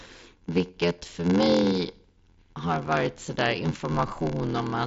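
A steady 86.1 Hz buzz runs through the whole clip, and the speech plays slow, at 0.861 of normal speed, at about its usual pitch. This is a block size mismatch (padded): each incoming block is shorter than the next stage's read, which fits a 512-sample buffer, and the remainder is zero-filled, leaving a gap per block. The mSBC headset codec's band, with nothing above 7.7 kHz, is audible beneath.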